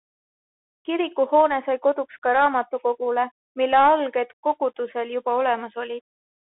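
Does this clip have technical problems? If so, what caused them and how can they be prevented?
Yes: Bluetooth CVSD headset codec throughout, cutting everything above 3.8 kHz, with scratchy sibilants and granular hiss that plain telephone band-limiting lacks. Prevent it by using a wideband headset profile or a wired microphone.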